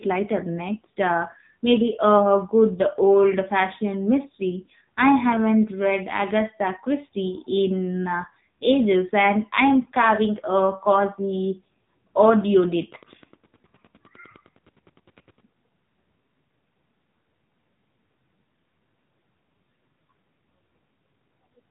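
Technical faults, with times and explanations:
Throughout: AMR narrowband mobile codec. Nothing above 3.8 kHz survives, so the speech has a boxed-in telephone quality. Unlike a plain low-pass filter, this codec rebuilds the voice from a vocal-tract model driven by sparse pulses in short subframes, so voiced sounds turn buzzy and synthetic. The damage is heavy, which fits a low mobile bitrate of around 6.7 kbps.
12.38 to 15.43 s: Wi-Fi interference. A steady ticking sits far below the speech, repeating every 102.4 ms, just under ten times a second. A nearby Wi-Fi radio's beacon bursts are being rectified by the audio circuit and leak in as clicks. Their spacing is what separates this from GSM buzz, which repeats much faster at 217 times a second and is heard as a continuous buzz rather than separate ticks.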